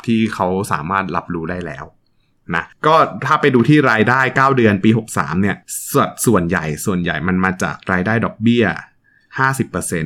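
Speech with hard clipping in six places: 0.42 to 1.18 s, 2.55 to 5.21 s, 5.97 to 6.57 s, 7.45 to 7.47 s, 7.92 to 7.94 s, and at 9.43 s. The signal is driven past what a stage in the chain can pass, by about 1 dB in the first and last three events and about 2 dB in the second and third, so the peaks are cut flat. Those flattened tops generate added high harmonics, heard as crackle on the loudest moments.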